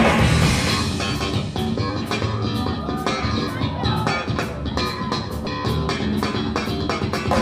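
At 5.44 to 5.47 s, damaged data in a compressed stream makes the decoder misread frames and resync, giving a brief glitch.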